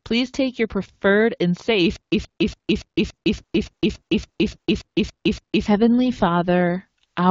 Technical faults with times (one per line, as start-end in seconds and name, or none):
1.96-5.67 stutter with silent gaps
3.35-4.57 AMR rate drop